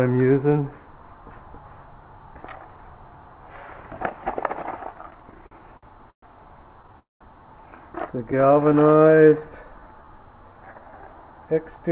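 From 4.94 to 6.24 s the call shows repeated stalls (stutter): packets kept arriving late, so the jitter buffer emptied eleven times in a row. Each time the receiver stretched the last bit of sound to cover the hole, about 305 ms in all, with the longest gap 119 ms. Nothing is lost, but nearly a quarter of that stretch is filler, so the sound lurches and catches, and the longer gaps fade.

At 6.99 s comes a call audio freeze, likely caused by packets being held up in transit until the buffer ran dry. The receiver filled about 212 ms, first carrying the last sound forward, then letting it drop to near silence for about 170 ms. Playback then resumes where it stopped, so the sound simply pauses and picks up again about 0.2 s late.

From 8.19 to 10.97 s a jitter buffer slow-down sets in. The buffer was rebuilding its reserve by repeating single pitch periods and slivers of pauses, adding about 316 ms. 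The sound plays at 89% speed with unchanged pitch, so it drags, with drawn-out sounds.

Overlapping this, from 8.32 to 9.43 s, a second burst of repeated stalls adds eleven more gaps. These are tiny, none longer than 13 ms and 87 ms in all. They make the sound catch and stutter again.

Throughout, the band stops at 4 kHz, as expected on a narrowband G.711 call.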